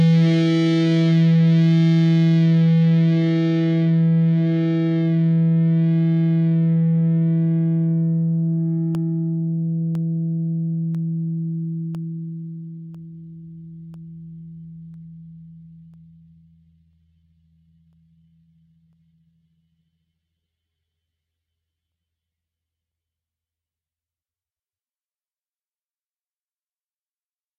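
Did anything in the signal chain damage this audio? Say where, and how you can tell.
Yes, periodic USB or driver dropouts occur from 8.95 s to 26.93 s, at the driver or buffer stage. A small tick sounds once every 1.0 s, around twenty in all. Each tick is a gap of roughly half a millisecond where samples were replaced by silence. The strict one-second spacing points to a background task that blocks the USB bus or audio driver on a timer, starving the stream briefly each time.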